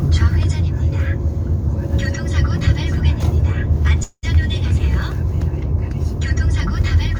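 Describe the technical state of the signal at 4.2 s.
At 4.2 s the signal is inside a call audio freeze running from 4.03 to 4.37 s, likely from delayed packets draining the jitter buffer. The last sound is stretched into a fading buzz or hiss for about 195 ms, then about 50 ms of silence, before resuming with nothing lost. A spectrogram shows frozen horizontal bands fading into a blank strip.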